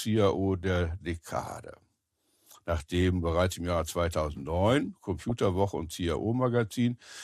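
From 5.20 to 5.50 s the speech breaks into DAB burbling. Residual bit errors slip past error correction into the MP2 data, so single sub-bands jump in level frame by frame. It bubbles and squelches, and a spectrogram shows scattered, blocky bright patches in isolated bands.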